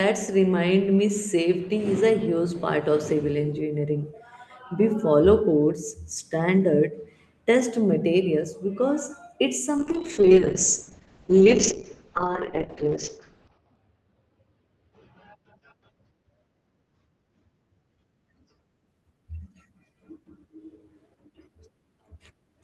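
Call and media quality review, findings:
Call bitrate drop, 9.79 to 18.93 s. Speech turns rough and muffled, with the top end cut from 20 kHz to 6 kHz and the worst stretch lasting about 3.8 s. Cause is encoder rate adaptation after a bandwidth-estimate fall, consistent with roughly 32 down to 6 kbps. The degradation is continuous, with no gaps or robotic repeats, which rules out packet loss concealment.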